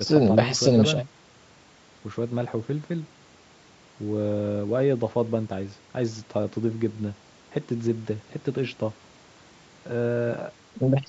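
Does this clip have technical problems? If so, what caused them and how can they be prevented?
No, this clip has no technical problems, so there is nothing to prevent.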